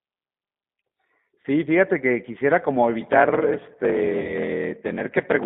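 Throughout, the G.729 codec at 8 kbit/s confines the sound to roughly 150 Hz to 3.7 kHz and gives it a plainly rough, synthetic texture. At 1.42 s, VoIP packet loss concealed by the speech codec bridges a 20 ms gap until 1.46 s: the decoder extends its last pitch and filter state into a brief sound that fades. From 2.99 s to the end, a padded block size mismatch inserts a silent stretch into every block, producing a 41.7 Hz buzz and slowing playback to 0.889 times normal speed at about the original pitch. That ratio fits 1024-sample blocks being read as 1152. A second concealed 20 ms packet loss at 4.22 s leaves the voice impaired until 4.33 s while the codec state recovers.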